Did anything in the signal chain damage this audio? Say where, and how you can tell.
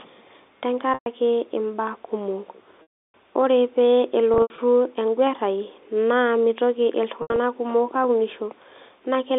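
Yes. The network stage dropped packets, and the receiver's concealment covered each gap by repeating the last pitch period: packet loss with pitch repetition. A 120 ms gap at 0.94 to 1.06 s and scattered losses at 4.34 to 4.58 s and 7.22 to 7.38 s, with runs up to 80 ms, come out as a briefly held, buzzy tone. The 320 ms loss at 2.82 to 3.14 s fades to silence before the speech cross-fades back. The gap lengths fit 20 ms packets, carried over the G.711 telephone link.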